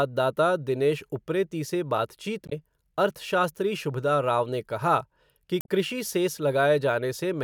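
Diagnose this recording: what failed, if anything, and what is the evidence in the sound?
The failure is damaged data in a compressed stream, at the codec stage. Bytes in the encoded file were lost or overwritten, so the decoder could not parse those frames, lost sync and resynchronised at the next valid header. In this speech recording, that produces two brief disruptions: one from 2.46 to 2.53 s, lasting about 64 ms, and another from 5.58 to 5.68 s, lasting about 96 ms.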